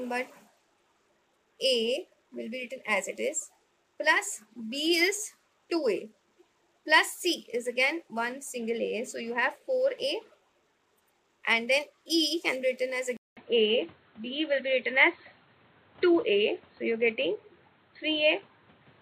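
At 13.17 s, after a 200 ms silence, the input switched to a poorer device, likely, leaving nothing above 4.2 kHz. The sound turns dull, a few dB different in level, with a new noise floor. On a spectrogram the top band goes dark, and the waveform shows the gap.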